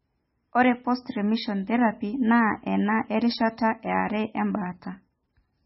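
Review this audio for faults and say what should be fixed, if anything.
The speech is band-limited for its whole length, with nothing above 5.6 kHz, and it carries heavy codec damage: a watery, swirling texture as weak spectral components drop in and out between frames, chirpy sibilants, and smeared onsets. This is likely MP3 compression at a very low bitrate, which fits an encoder starving for bits, cutting the treble at a fixed point and zeroing quiet frequency lines. To prevent it, keep an uncompressed or lossless master and, if MP3 delivery is required, encode at a substantially higher bitrate.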